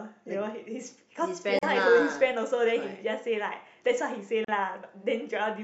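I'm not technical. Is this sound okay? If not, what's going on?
No. There are two short silences, at 1.59 s and 4.45 s, each about 40 milliseconds. This is a gap at a join of encoded pieces. The audio was saved in separate parts and stuck together, leaving empty bits at the seams. The speech then resumes where it stopped.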